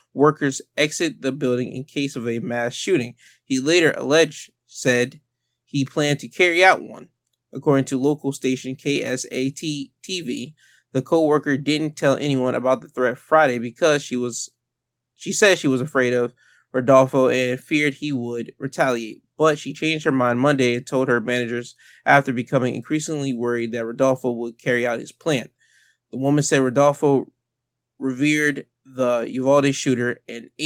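No technical faults can be heard anywhere in this speech recording. Nothing interrupts or distorts the audio at any point.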